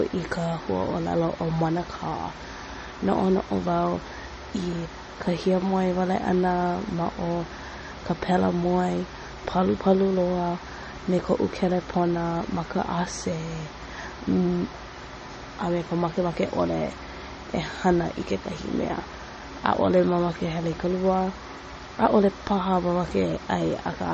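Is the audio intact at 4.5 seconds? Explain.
No. At 4.5 seconds, as throughout, the speech carries transcoding between lossy codecs, likely a low-bitrate MP3 re-encoded through WMA. Smeared, warbling artefacts from both stack together, and a spectrogram shows a hard ceiling with nothing above 8.2 kHz.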